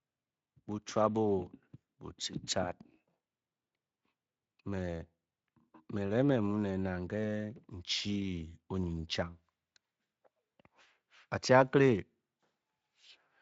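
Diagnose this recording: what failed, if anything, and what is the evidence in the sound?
Nothing stood out on listening that points to a failure at any stage of the chain.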